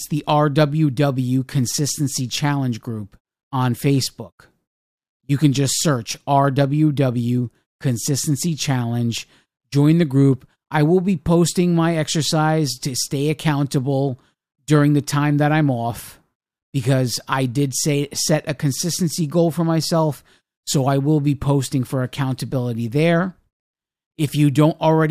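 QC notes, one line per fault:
No faults found in this speech clip. Nothing here needs attention on playback.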